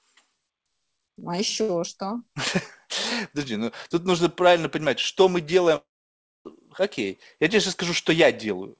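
At 5.76 s, right after "правильно понимать что мы", the speech breaks off. A short buzzy continuation of the last sound fades out. About 0.6 s of near silence follows. Speech returns at 6.47 s with "окей я тебе сейчас", and roughly 0.7 s of it is gone. This is likely a long network dropout. Packets stopped arriving, and the receiver briefly stretched the last audio before giving up. The call audio through this gap has no content above 8 kHz, which fits G.722 at 64 kbps.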